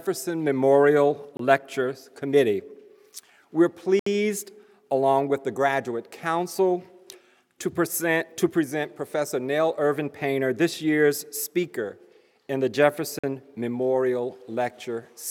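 Blocks of digital silence at 1.37 s (23 ms), 3.99 s (70 ms) and 13.19 s (46 ms): unfilled output buffers, fitting 1024- and 2048-sample blocks, cut to silence abruptly with no fade.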